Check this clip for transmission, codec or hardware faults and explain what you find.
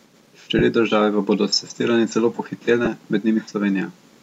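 Two brief dropouts come from lost LE Audio frames, at 0.59–0.61 s and 2.85–2.87 s. Each is about 20 ms, consistent with two 10 ms frames. The LC3 decoder filled each gap by replaying the last spectrum with randomised signs, so the speech briefly turns into a short noisy smear.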